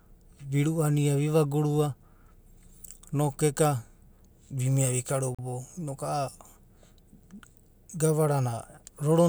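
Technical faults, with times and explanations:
5.35 to 5.39 s, Bluetooth stall: the speech cuts to a short dropout of about 39 ms of digital silence, then carries on with no fade in or out on either side. A gap this brief and clean is likely a wireless link stall, where interference delayed packets long enough for the receiver's buffer to empty, halting playback until the retransmitted audio reached it and output resumed.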